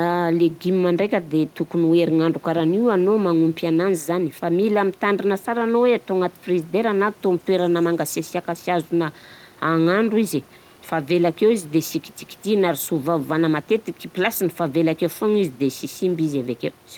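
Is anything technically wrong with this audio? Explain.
No, nothing is technically wrong.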